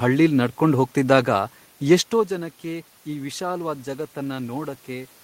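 No technical faults can be heard in the speech. A bed of room noise sits underneath it, and around two seconds in the level shifts as the talker moves relative to the microphone.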